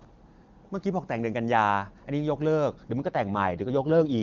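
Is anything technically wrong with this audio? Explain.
Yes. From 2.98 s to 4.21 s the speech turns rough and synthetic without losing bandwidth: an AMR rate drop, consistent with the AMR-WB codec falling from 23.85 to 8.85 kbit/s.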